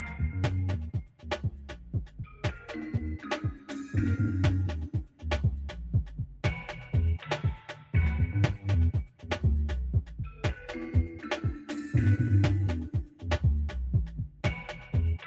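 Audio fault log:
Throughout: noise suppressor applied to music or sounds. A speech-tuned suppressor was left running, so it treats steady tones, ambience and tails as noise. Level swings by around 10 dB, making things pump and thin while attacks slip through. Nothing above 8 kHz survives the call path.
0.00–0.21, 0.80–2.69, 7.60–7.94, 9.12–9.30, 10.33–10.65, 14.28–14.44 and 14.74–14.94 s: sound cut by the noise suppressor. Held or decaying bits get pushed down by about 7 to 13 dB. The longest stretch, near 0.8–2.7 s, sinks for roughly a second and a half.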